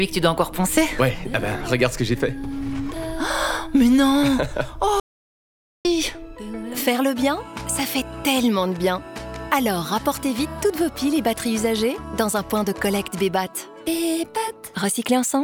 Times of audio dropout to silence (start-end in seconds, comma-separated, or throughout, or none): 5.00-5.85